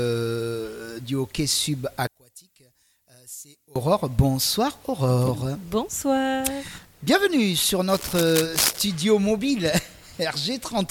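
From 2.07 to 3.76 s, one channel inverted in polarity is the likely cause: summed to mono, the shared content cancels, dropping the level by about 22 dB to a faint residue. From 7.88 to 8.78 s, cable scratch noise, likely from a worn cable or connector being moved, adds dense, uneven scratching bursts only a few decibels below the sound.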